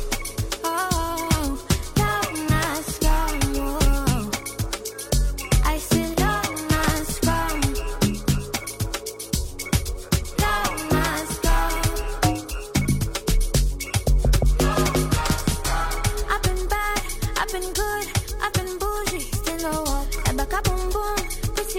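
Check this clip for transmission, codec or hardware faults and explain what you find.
Nothing in the clip points to a transmission, codec or hardware problem. No audible fault turns up anywhere in the audio.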